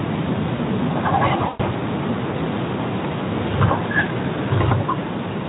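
At 1.47 to 1.61 s and again at 4.03 to 4.11 s, the speech shows VoIP packet loss concealed by the speech codec. About 120 ms goes missing in the first event, which fits six 20 ms frames, and about 20 ms goes missing in the second. Across each gap the decoder repeats its last pitch and filter at falling gain, producing a buzzy tone or coloured noise that fades. On a spectrogram, frozen horizontal harmonics thin out, and the waveform envelope decays. The speech is coded with Speex at 15 kbps, with light coding damage.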